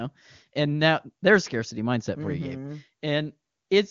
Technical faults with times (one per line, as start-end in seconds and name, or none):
none